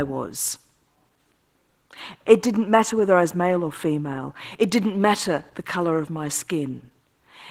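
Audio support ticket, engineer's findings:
Opus voice compression on the speech, throughout the whole take. Hoarse, slightly robotic grain and a smeary, thin top end, plainly audible. Sounds like hybrid mode: SILK linear prediction below 8 kHz, CELT layer on top, coarse excitation. Fits a bitrate around 16 kbps.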